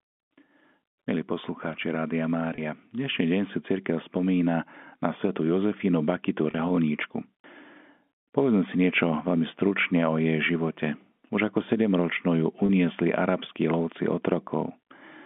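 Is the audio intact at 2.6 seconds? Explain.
No, there's a packet loss with pitch repetition from 2.55 to 2.58 s: about 30 ms went missing, and the receiver repeated the last pitch period, giving a brief held, buzzy sound.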